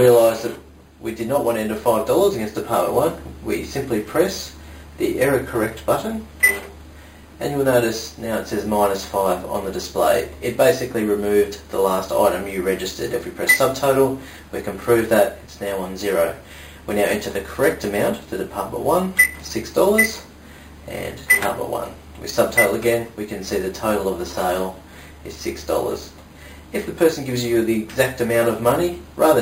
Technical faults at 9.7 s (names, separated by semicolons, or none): imaging from sample-and-hold upsampling